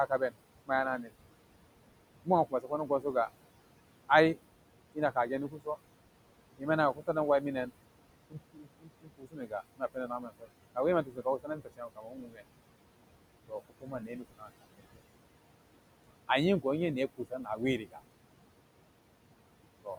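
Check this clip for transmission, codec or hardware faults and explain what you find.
Two faults are audible, both from noise suppression acting on speech, with the room noise sitting about 14 dB below it.

Noise suppressor artifacts run through the whole clip. The background sinks by about 21 dB between phrases and swells back up under the speech. The suppressor turns down each band it judges to be steady noise, frame by frame, so the noise floor pumps with the speech.

Speech cut by the noise suppressor occurs at 0.08–1.13 s, 2.24–3.15 s, 4.94–5.77 s, 6.58–7.71 s, 8.3–12.43 s, 13.48–15.0 s and 16.28–18.0 s. In these stretches soft consonants and word endings sound swallowed, dropping by about 17 to 22 dB. Quiet speech energy was taken for noise and lowered along with it. The 8.3–12.43 s stretch is hit hardest, with around two seconds affected.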